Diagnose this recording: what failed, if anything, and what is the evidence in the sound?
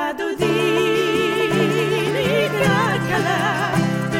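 Nothing stood out on listening.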